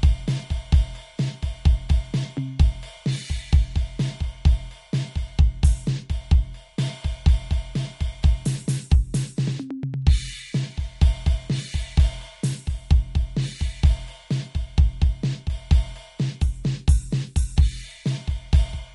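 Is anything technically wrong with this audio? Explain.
Yes. Throughout the music there's plainly audible MP3 compression damage, likely from a low-bitrate encode, roughly 47 kbps. Nothing survives above 11.2 kHz, so the top sounds dull, and weak frequency detail flickers frame to frame, giving a watery, swirly texture with smeared attacks.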